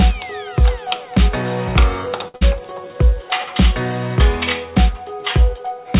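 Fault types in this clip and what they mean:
Short stall from a late packet: At 2.28 s a packet arrives late and the jitter buffer runs dry, so the receiver stretches the last sound for about 61 ms until 2.36 s, then continues from the same point. Nothing is lost, but the sound is held too long.
Burst of packet loss: Immediately after, from 2.36 to 2.43 s, packets are missing and the receiver fills 49 ms by continuing and fading the last sound. Playback then resumes with about 60 ms of audio skipped, a little more than the filled gap.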